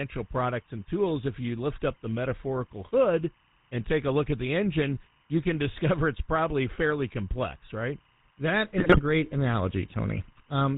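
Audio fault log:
throughout, timecode bleed: a faint chirping warble sits roughly 35 dB under the speech, square-wave code flipping between pitches near 1 and 2 kHz, consistent with 25 frame-per-second linear timecode leaking in.
throughout, GSM full-rate codec: speech has a buzzy, gravelly roughness and nothing above 4 kHz, as pulse-driven vocal-tract modelling discards excitation detail; the damage is plainly audible and fits 13 kbps coding.
8.78–9.00 s, GSM bit errors: the speech breaks into squawks and gargling as corrupted filter, pitch and gain values reach the decoder, distorting the spectrum and level frame by frame.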